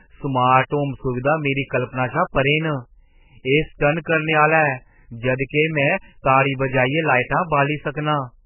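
Throughout the whole recording, an encoder starved of bits has likely squeezed the speech through heavy MP3 compression, at a rate so low it fits roughly 8 kbps. With too few bits to go round, the encoder has cut away everything above 3 kHz and kept dropping weaker frequency lines in and out from frame to frame. The result is dull, muffled speech with a watery, swirling quality, blurred consonant onsets and a metallic chirp on s sounds.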